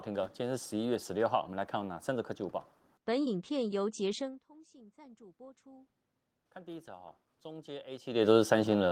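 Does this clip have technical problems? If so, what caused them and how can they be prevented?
Yes. From 4.29 to 8.14 s there's automatic gain rising: the talker drops back around 4 s, the input falls by about 24 dB, and the gain control slowly adds about 10 dB, so voice and room noise swell together. Setting a fixed gain, or a slower and gentler AGC, would prevent it.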